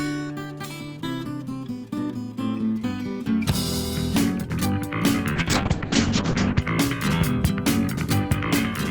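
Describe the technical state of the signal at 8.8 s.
At 8.8 s the signal is intact, with no audible fault at that moment.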